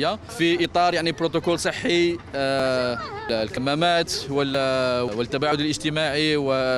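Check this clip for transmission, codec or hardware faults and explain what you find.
Brief skips recur at a steady pace, at 0.65, 1.62, 2.60, 3.57, 4.55 and 5.52 s, each dropping a few tens of milliseconds with the two sides butted together. This is audio missing between chunks, likely from a processor handling roughly one-second blocks and losing a sliver at each handover.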